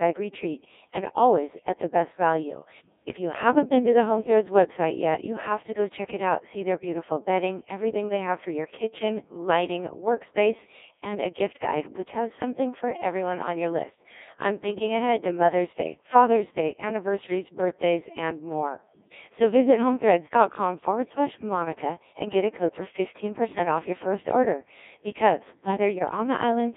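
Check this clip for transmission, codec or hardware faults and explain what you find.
Two problems here, one lasting the whole clip and one right at the end.

The speech runs through the Codec 2 vocoder the entire time. The heavy buzzy, robotic quality fits its 1.6 kbit/s mode. Only pitch, voicing, energy and a spectral envelope get sent, and the decoder rebuilds the voice from sine waves inside a narrow band of roughly 250 Hz to 3.6 kHz.

Then, from 25.96 to 26.10 s, there's a short burst of bit errors on digital voice radio. Corrupted bits threw off the per-frame pitch, level and spectrum settings across what sounds like a couple of frames, so the voice briefly lurches into warbly, bleepy gibberish. That points to a bit error rate of about 2 percent.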